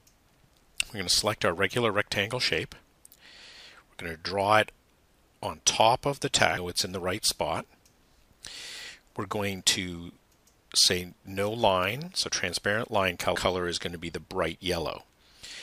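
At 6.57 s and again at 13.35 s, compressed frames are skipped: about ten frames, roughly 0.7 s of sound, never play, fitting 92.9 ms frames. Each time the audio jumps ahead by that missing stretch.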